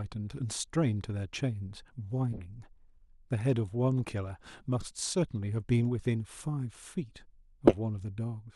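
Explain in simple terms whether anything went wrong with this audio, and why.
Three short glitches interrupt the speech, at 2.33 to 2.41 s, 4.80 to 4.86 s and 7.67 to 7.75 s. Each is a corrupt frame decoded: damaged compressed data was played anyway, scattering sound into wrong pitches. The result is a brief chirp or noise burst, loudest at 7.7 s.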